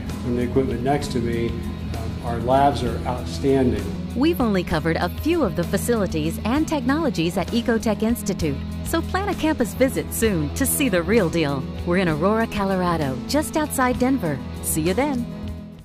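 At 9.61 to 9.84 s, hard clipping: peaks overdriven about 3 dB are sliced flat, giving brief crackle, sharper and more abrupt than gentle saturation's rounded warmth.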